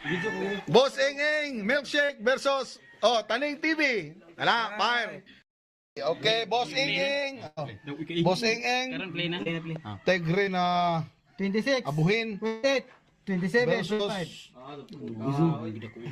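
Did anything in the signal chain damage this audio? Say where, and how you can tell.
Yes. At 2.05, 9.43 and 10.45 s there are brief smears where a few hundredths of a second of sound briefly wobbles. This is short concealed packet loss on the network path: about 20 to 40 ms never arrived, and the decoder bridged each hole by extending the preceding sound.

At 7.47 s and 13.93 s the sound turns into a held buzz or fading hiss, about 100 ms and 60 ms long, then jumps ahead. These are bursts of packet loss, consecutive packets lost in transit, with concealment stretching and attenuating the last audio across the gap.

At 9.76 s a single sharp pop sits on top of the sound, peaking roughly 5 dB above it while the audio continues underneath. This loud pop is likely an electrical transient, such as a connector, switch or static discharge, entering the analogue wiring or converter stage.

From 12.47 to 12.65 s the sound dissolves into a fading buzz or hiss for about 160 ms, then resumes with that stretch missing, without dropping to silence. 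This is likely a long network dropout, with the receiver's concealment filling the whole interval.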